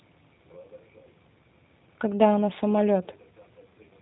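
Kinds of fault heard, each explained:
G.729 codec: low-rate VoIP coding rebuilds the speech from a vocal tract model and sparse pulses, so it sounds plainly rough and synthetic, with nothing above 3.8 kHz.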